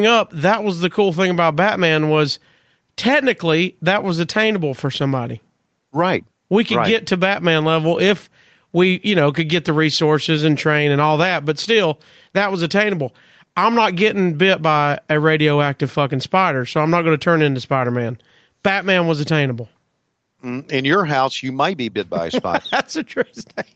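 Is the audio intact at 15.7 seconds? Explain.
No. Gain pumping runs through the whole clip, including 15.7 s. The gain swings by around 5 dB, likely from a fast limiter acting on over-high microphone gain. The waveform shows a squashed, uneven envelope.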